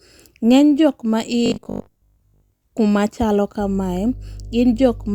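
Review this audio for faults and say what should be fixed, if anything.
From 1.46 s to 2.62 s the speech turns into a rigid metallic buzz at 50 Hz: robotic sound from repeated short buffers. The likely cause is new audio arriving too slowly, so the playback fills the gap by looping the last chunk, here about 20 ms long, which sets the 50 Hz buzz while most of the real audio is skipped. A spectrogram shows evenly spaced harmonic lines at multiples of 50 Hz, and the waveform shows identical 20 ms cycles. Larger or better-scheduled buffers would prevent the underruns.

Mains hum runs from 3.60 s to the end, a steady 50 Hz tone at about 15 dB below the signal. Power-line current is leaking into the audio path, typically through a ground loop or coupling from a nearby transformer. On a spectrogram it is a flat, unbroken line at 50 Hz, and in the waveform it appears as a slow periodic ripple under the speech, visible even in pauses. 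Breaking the ground loop or moving cables away from power sources would keep it out of the recording.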